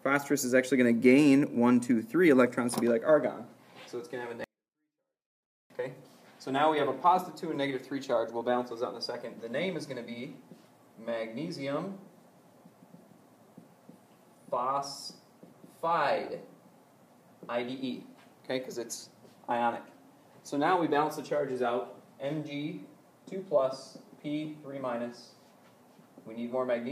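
At 4.44 s the sound suddenly drops to near silence and stays there until 5.70 s, a 24-bit alignment error that leaves it too quiet. The samples sit in the low 24 bits of 32-bit words but are read as full 32-bit integers, shrinking every value by about 48 dB with no added distortion. The waveform collapses to a flat line for that span, and the spectrogram fades to a faint but intact copy of its usual pattern.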